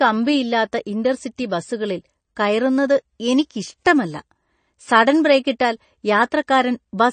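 MP3 compression artefacts run through the whole of this speech clip: nothing is present above about 9.1 kHz, and the damage is plainly audible, which points to a low bitrate around 32 kbps. The likely cause is an MP3 encoder starved of bits, cutting off the treble at a fixed frequency and dropping weak spectral lines that flicker from frame to frame, giving the sound a watery, swirly texture with smeared attacks.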